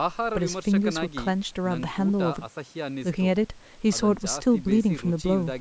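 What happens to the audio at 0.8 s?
At 0.8 s the speech runs on intact, with no fault at that moment, only the usual call microphone processing that trims the lowest bass and leaves nothing above 8 kHz.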